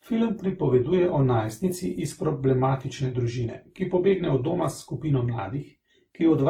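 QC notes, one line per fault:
Throughout: transcoding between lossy codecs. The speech carries two layers of coding damage at once. A narrow, band-limited quality with smeared, warbly detail, consistent with a very low-rate Opus encode around 16 kbit/s, sits under the artefacts added by WMA. The second codec spends its larger budget re-encoding the first codec's artefacts rather than restoring anything, so the low bandwidth remains and both sets of distortion are heard together. The likely cause is Opus followed by WMA 1 at about 96 kbit/s.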